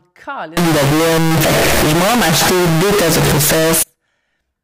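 Speech that, from 0.57 to 3.83 s, turns into a near-square, harsh blast at a high, almost fixed level, with background noise as loud as the voice. The likely cause is float read as integer, with 32-bit float samples decoded as 32-bit integers. Unlike ordinary clipping, even quiet passages hit the same level, yet pitch stays followable.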